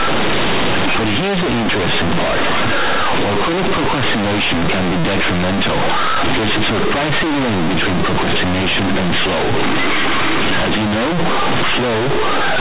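Buzzy, bent distortion runs the whole clip, with noise in the pauses: companded audio read as linear, mu-law bytes played as linear 8-bit samples without expansion.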